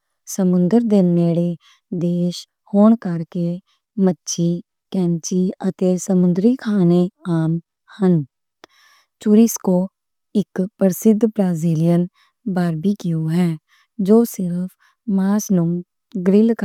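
No technical faults can be heard anywhere in the speech, and the signal holds steady throughout.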